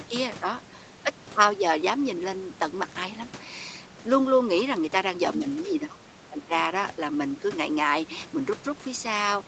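From 5.66 to 6.52 s the speech drops sharply in level, by roughly 15 dB at its deepest, and the affected stretches add up to about 0.7 s in total. This is speech suppressed in double talk, likely from an echo canceller that mistook the talker for loudspeaker echo while both sides spoke and turned the signal down. On a waveform the envelope sinks. A spectrogram shows the bands fading, against a band limit near 8 kHz from the call processing.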